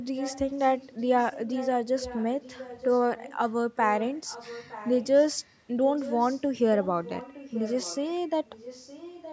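A delayed copy of the speech trails the voice by about 0.91 s from 0.16 to 5.55 s, 5.96 to 6.44 s, 6.76 to 8.14 s and 8.45 s to the end. This is an echo leak, likely a far-end loudspeaker echo that its echo canceller failed to remove. It sits roughly 15 dB below the speech, dropping to roughly 20 dB below in the final stretch.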